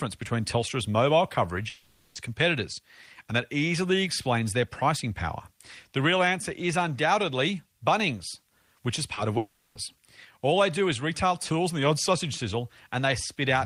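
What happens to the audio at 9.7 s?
A long network dropout runs from 9.37 to 9.77 s, and 9.7 s falls near its end. The gap is most likely caused by a stretch of audio packets that never arrived. For about 380 ms, the receiver stretches the last sound it received into a buzzy, hissing continuation that fades and never drops to full silence. When the speech resumes at 9.77 s, the 380 ms lost during the gap is simply missing.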